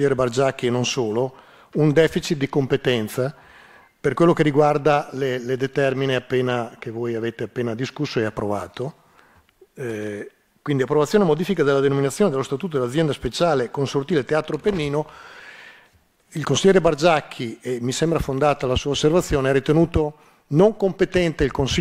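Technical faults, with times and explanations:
No technical faults can be heard anywhere in the recording. There is nothing here that calls for a time or an explanation.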